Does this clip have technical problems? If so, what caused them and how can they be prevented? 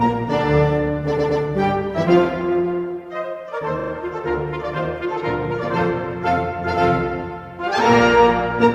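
Yes. Repeated frames cause stutters at 1.17–1.41 s, where a 120 ms block plays twice more, and at 3.79–3.91 s, where a 40 ms block repeats three extra times. The spectrogram shows identical copied slices. Deduplicating frames by sequence number before decoding prevents this.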